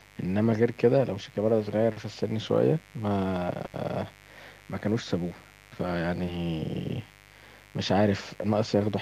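From start to finish the speech carries a mains buzz, a steady raspy drone sitting roughly 25 dB below it. Sharp switching spikes on the 50 Hz supply spray harmonics up into the kilohertz range, so it rasps, unlike a smooth low hum.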